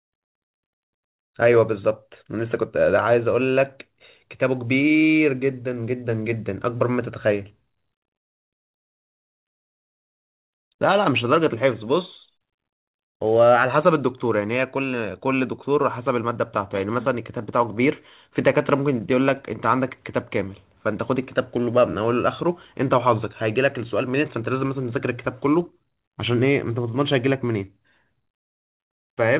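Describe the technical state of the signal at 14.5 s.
At 14.5 s the speech comes through intact with no fault, carried over a call path whose G.711 mu-law coding at 64 kbps limits the sound to nothing above 4 kHz.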